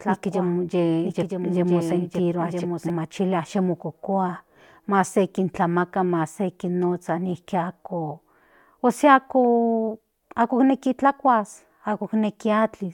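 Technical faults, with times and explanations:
0.0–2.9 s, doubled audio track: the speech is already doubled when the clip begins, with a second full-band copy running about a second behind and roughly 5 dB quieter than the original. The copy is dry, with no decay or room colour, so it sounds like an overlapping duplicate rather than an echo. It ends abruptly at 2.9 s. The likely cause is the same signal arriving again through a slower capture path.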